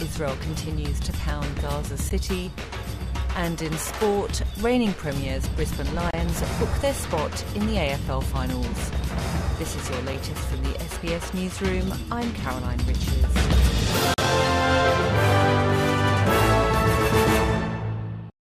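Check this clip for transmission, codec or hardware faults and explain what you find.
One fault appears, a gap between stream segments, three times: at 2.09 s, from 6.11 to 6.13 s, and from 14.14 to 14.18 s, lasting 14.5, 25.5 and 42 ms. Segment timestamps leave small holes at the 4-second boundaries, which the player fills with digital silence. Each hard-edged dropout appears as a flat-line break in the waveform and a clean vertical stripe across every frequency on a spectrogram.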